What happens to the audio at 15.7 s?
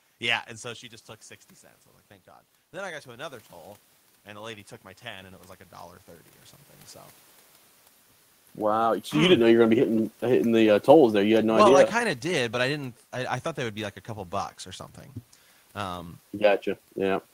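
Nothing goes wrong at 15.7 s; the audio runs on intact through that moment, with no dropout, glitch or distortion.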